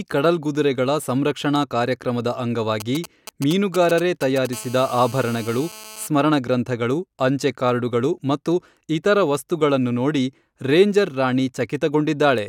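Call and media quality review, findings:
GSM signalling bursts, 2.80–4.47 s: nearby 2G handset in signalling, mic/preamp stage rectifying RF. Galloping dit-dit-dit ticks and short 217 Hz buzz groups over speech, roughly 10 dB under it.

GSM phone buzz, 4.53–6.07 s: nearby 2G handset in a call, transmitting in bursts 217 times a second, rectified in the audio front end. Steady raspy 217 Hz buzz, harmonic-rich, unrelated to speech, about 19 dB below it.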